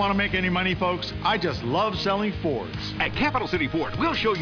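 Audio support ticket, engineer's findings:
No faults heard on this one, so there's nothing to flag from the audio as it stands.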